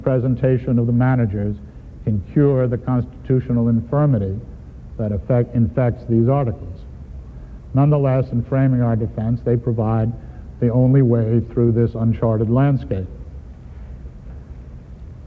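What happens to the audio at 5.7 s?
Nothing goes wrong at 5.7 s: the audio passes through intact, carrying only the ordinary character of the G.722 call path, which leaves nothing above 8 kHz.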